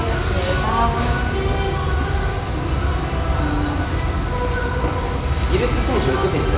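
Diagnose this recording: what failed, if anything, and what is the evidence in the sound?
Nothing in this recording of everyday sounds points to a failure at any stage of the chain. No event in the sound suggests a problem in the wiring, conversion, buffering, transmission, storage or playback.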